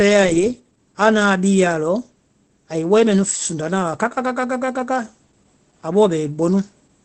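Opus voice compression runs through the whole speech clip. Nothing sounds above 8.3 kHz, the wideband limit of the SILK speech coder. The coarse, plainly audible damage points to a low bitrate near 12 kbps. Speech comes out muffled, hoarse and slightly robotic.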